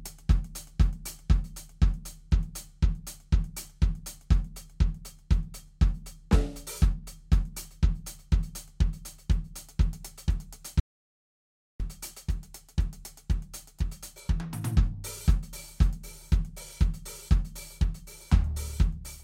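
At 10.80 s the music just stops dead and stays gone until 11.80 s, a full second of audio dropout to silence. It's silent in that gap, with no room tone or hiss underneath, and the music comes back mid-phrase as if nothing happened. That second of playing is simply lost. The cause is likely the input cutting out, a loose connection, a failed link or an accidental mute, while the recorder kept writing silence.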